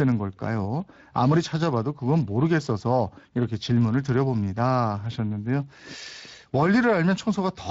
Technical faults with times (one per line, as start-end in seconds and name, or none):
0.00-7.70 Speex codec